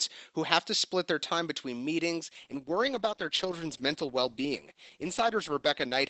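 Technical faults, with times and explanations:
2.28–6.09 s, adaptive stream at a lower bitrate: just after "their time between meetings" the sound switches abruptly to a lower quality, with codec smearing that stays until the end. The connection slowed and playback moved to a lower-bitrate version, which fits a step from around 64 to about 12 kbit/s Opus. Packet loss would leave gaps or brief glitches; here there is no gap, only a sudden, sustained loss of quality, heard against faint room noise about 52 dB below the speech.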